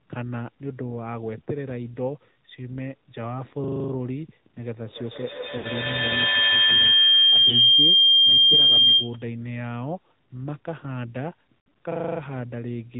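Throughout, the speech carries the AMR narrowband mobile codec: a hard ceiling at 4 kHz and a buzzy, synthetic edge, which fits a mid-range rate around 10 kbit/s. Because each 20 ms frame models the voice from a few pulses, the damage is a steady, even roughness rather than isolated events.

At 5.58 s come lost AMR speech frames. About 60 ms of speech is drawn out and fades, which fits three 20 ms frames. The decoder repeats the last good pitch and vocal tract settings with falling gain. At 7.50 s a single 20 ms loss gives only a brief dip and warble. Between 11.63 and 11.78 s, losses scattered over about 160 ms, the longest run about 60 ms, cause repeated smears and weak recoveries. Unlike a loop, each gap decays and never repeats exactly.

From 11.92 to 12.20 s a system hang loop takes over. One 40 ms piece of audio repeats seven times, a rigid stutter at 25 Hz with no fading. That identical, undecaying repetition of a frozen buffer sets it apart from the concealment smears just before it.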